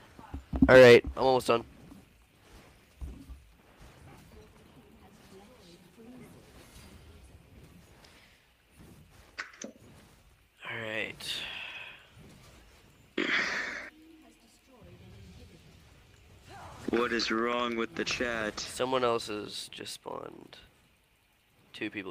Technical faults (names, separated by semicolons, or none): none